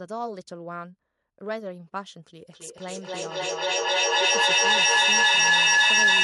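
From 2.49 s onward, feedback echo between two devices: sound loops back about every third of a second, building to about 15 dB above the speech instead of decaying like ordinary echo.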